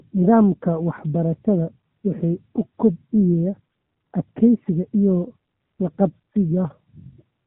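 The whole clip is speech run through the AMR narrowband mobile codec, and at 7.4 kbps the damage is plainly audible from start to finish. Everything above 4 kHz is simply gone, which fits 8 kHz sampling, so the sound is boxed into that thin phone band. On top of that, the low bitrate leaves the vocal-tract model starved of pulses per subframe, giving a buzzy, synthetic edge throughout.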